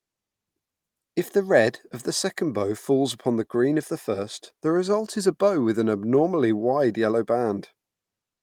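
No technical faults are audible.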